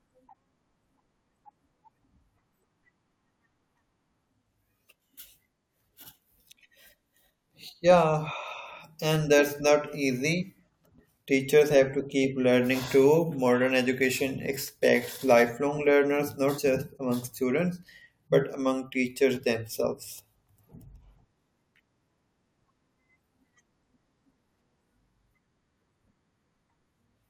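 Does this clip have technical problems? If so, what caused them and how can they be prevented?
Yes. At 10.42 s and 16.57 s, compressed frames are skipped. Each time, about two frames of roughly 23.2 ms each go missing, so the speech jumps ahead by about 50 ms. On a spectrogram, a short vertical seam appears where harmonics and formants shift abruptly. The waveform shows a sudden change in shape. Storing and transmitting the file with error checking and retransmission, so no frames are lost or corrupted, would prevent this.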